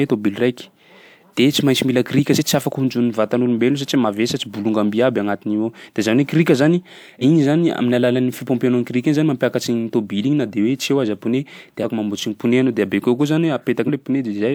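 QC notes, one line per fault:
2.35–2.38 s, 7.21–7.23 s, 11.82–11.85 s, 13.87–13.90 s: compressed frames skipped. The speech jumps forward each time, after "tsy maintsy mila krika", after "krika zany", and just before "mamboatsy ny". Roughly 150 ms goes missing, or about 100 ms at 11.82 s. That fits whole frames of around 42.7 ms being dropped by the decoder.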